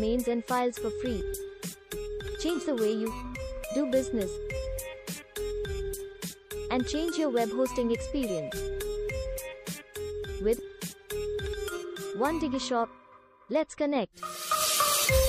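No dropouts, clicks, distortion or other technical faults can be heard anywhere in the recording, and the signal holds steady throughout.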